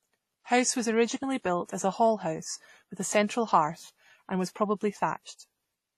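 Transcoding between lossy codecs runs through the whole speech clip, likely from a low-bitrate AAC-LC stage around 32 kbit/s followed by a WMA encode near 48 kbit/s. Nothing remains above 14 kHz, the lowest cut-off in the chain. The second encoder spends some of its bits preserving the first one's artefacts. Its own quantisation noise is layered on top, so two kinds of coding artefact are heard together.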